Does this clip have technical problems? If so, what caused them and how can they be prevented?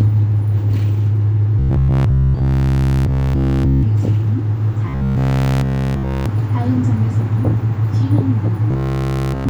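Yes. From 1.59 to 3.83 s, 4.89 to 6.26 s and 8.71 to 9.49 s the sound becomes a rigid, metallic 66.7 Hz buzz, robotic sound from repeated short buffers. Audio likely arrived too slowly, so a 15 ms segment was replayed in place of nearly everything new. Larger jitter buffers and a less overloaded processing path would prevent it.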